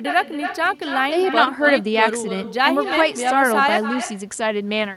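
From the start, every phrase returns as an echo with no canceller, a thinner copy about 9 dB down and roughly a third of a second late: a distinct repeat rather than a smeared room tail. At 3.78 s comes a cut-off end, as the final buffers never played; the speech stops mid-sound into dead digital silence with no decay and never resumes, unlike a brief dropout.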